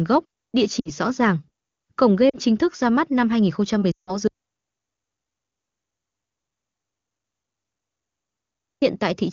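A speech clip carried over AMR wideband (HD Voice), whose clean upper band suggests a high-rate mode, shows lost AMR speech frames at 0.79 to 0.90 s, 2.30 to 2.37 s and 3.92 to 4.17 s. Failed frames made the decoder stretch its last good pitch and vocal-tract settings with sinking gain, so the first two gaps (60 ms and 40 ms) drop to near silence within two frames. The 160 ms run likewise falls to near silence quickly, and the voice comes back weak or rough for a moment. An audio dropout to silence follows from 4.28 to 8.82 s, about 4.5 s of silent waveform and an empty spectrogram with no room tone, likely from the input link failing while recording continued.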